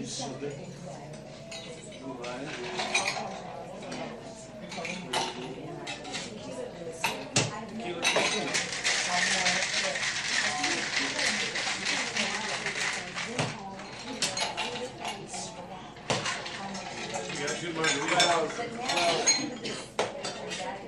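Nothing stood out on listening; no technical problem could be heard anywhere in the audio.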